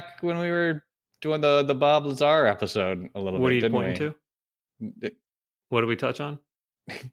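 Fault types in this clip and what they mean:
Lost packet rebuilt from error correction: three single 20 ms packets, near 0.53, 2.35 and 5.87 s, were replaced by the low-bitrate copy carried in the following packet, so there is no gap, just brief rougher, noisier patches, unlike concealment's smeared guesswork.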